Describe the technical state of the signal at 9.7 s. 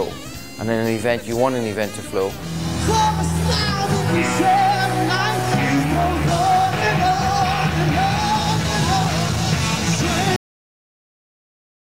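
At 9.7 s the audio carries low bit depth without dither. It is not a local event, since it runs through the whole clip. The sound is grainy and gritty, with the distortion tracking the signal itself. The error sits roughly 25 dB below the signal. The likely cause is rounding down to very few levels with no added dither, which fits about 6 bits with plain truncation. Detail smaller than one step is lost.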